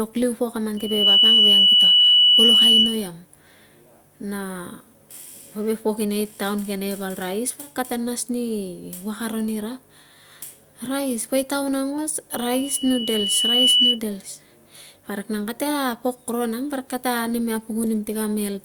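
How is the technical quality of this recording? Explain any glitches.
The speech is marred by two bursts of loudspeaker feedback squeal. From 0.77 to 3.09 s and from 12.31 to 13.99 s, a 3 kHz tone swells well above the speech as the microphone re-amplifies its own loudspeaker. The first burst builds almost at once, the second over about a second and a half. That swelling onset distinguishes it from a steady interfering tone.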